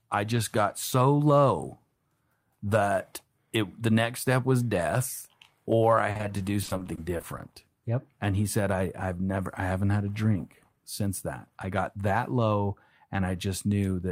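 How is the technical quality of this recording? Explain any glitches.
The recording has one clear problem spot in the speech. From 6.11 to 7.40 s, just after "was death or I", there's repeated packet loss (robotic sound). Packets kept dropping or arriving late, and each hole, none longer than 40 ms, got papered over by stretching the previous sound. That concealment fills roughly a fifth of the stretch, so it comes out choppy with bits missing.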